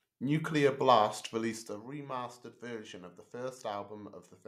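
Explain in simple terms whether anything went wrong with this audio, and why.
Nothing went wrong here: the speech comes through intact, with no glitches, dropouts or odd jumps anywhere along the way.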